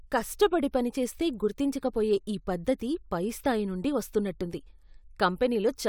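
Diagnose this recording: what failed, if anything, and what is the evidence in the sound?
Nothing failed: no stage from capture through playback leaves an audible mark anywhere in the speech.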